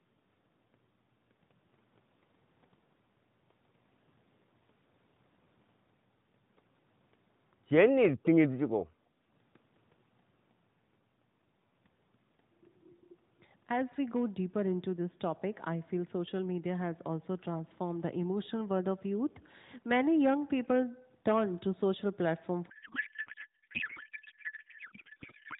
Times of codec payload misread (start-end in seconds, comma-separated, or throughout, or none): 22.70-25.59